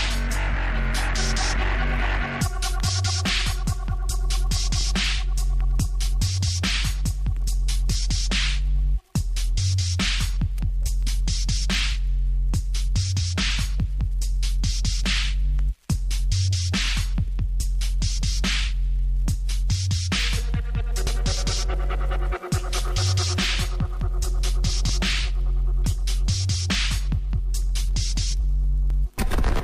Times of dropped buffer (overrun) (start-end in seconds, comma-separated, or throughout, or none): 21.07, 24.89